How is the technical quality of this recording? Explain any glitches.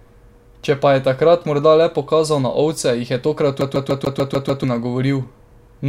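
The recording has one clear glitch: a CD stuck on one turn, from 3.61 to 4.64 s, right after "je tokrat". A scratch keeps knocking the laser back a track at the same point each revolution, so roughly 0.15 s of the speech (a 147 ms loop) plays seven times in a row, with a brief mute at every jump. You hear it as that quick, evenly spaced stutter of a skipping disc before playback moves on.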